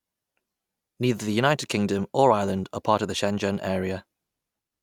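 No technical faults can be heard anywhere in the speech.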